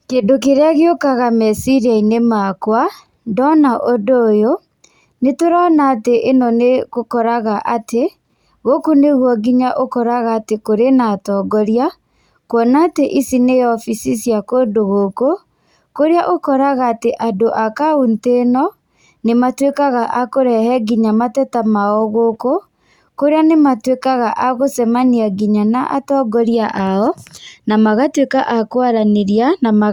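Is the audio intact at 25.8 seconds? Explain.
Yes, at 25.8 seconds the audio is intact, with no dropout, glitch or other fault at that moment.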